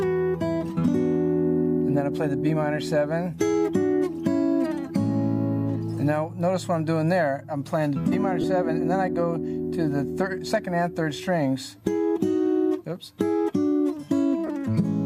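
At 8.41 to 8.44 s, lost LE Audio frames cause a brief dropout. About 22.5 ms of the stream is missing, which fits three 7.5 ms frames. The LC3 decoder fills the gap by repeating the last spectrum with randomised signs. The sound becomes a short noisy smear instead of a clean continuation. The same fault recurs at 14.46 to 14.49 s, again about 22.5 ms long. Both gaps are too short to fade into silence.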